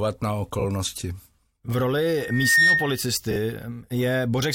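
Speech with two kinds of fault. Frames out of order at 0.59–0.64 s and 3.31–3.36 s: two adjacent 23.2 ms frames play swapped, giving a brief garbled flutter, and unlike a dropout no time is lost. A loudspeaker feedback squeal runs from 2.18 to 3.03 s as a single 1.8 kHz tone that swells over roughly 0.4 s to about 10 dB above the speech, a growing howl rather than a steady hum or whistle.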